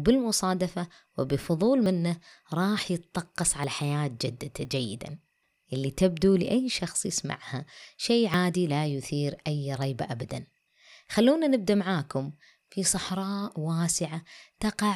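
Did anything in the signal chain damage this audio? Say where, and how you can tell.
Yes. Small skips in the speech at 1.86, 3.64, 4.65 and 8.34 s. Likely a dropped buffer (overrun) in the driver: samples overwritten before being read, the gap spliced shut.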